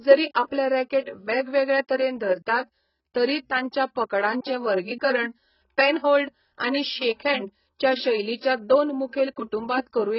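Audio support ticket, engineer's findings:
Dull, band-limited speech throughout, nothing above 5.5 kHz, warbly smeared sibilants. Likely AAC compression at a very low bitrate: encoder cutting high bands, coarse quantisation.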